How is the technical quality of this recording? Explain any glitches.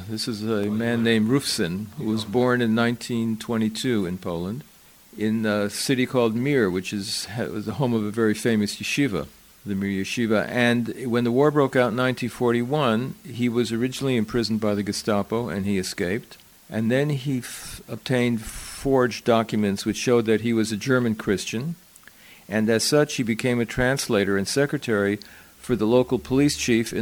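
Two brief dropouts mar the recording, at 0.64 s and at 14.01 s, each a block of digital silence. The output buffer likely went unfilled in time, so stretches of samples were left silent: about 0.68 ms at the first point and 2.9 ms at the second, which fits a 128-sample block. Because the signal cuts out and back with no fade, each gap, far shorter than 15 ms, is heard as a tick at 0.64 s and at 14.01 s.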